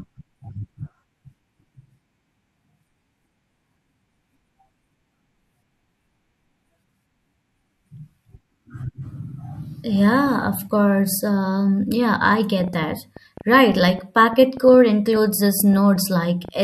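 From 12.6 s to 16.5 s, just after "yeah I", a train of clicks runs over the speech: roughly thirty similar pulses at about 6.4 per second, unevenly spaced and about as loud as the voice. Interference or a faulty connection or power supply is the likely source.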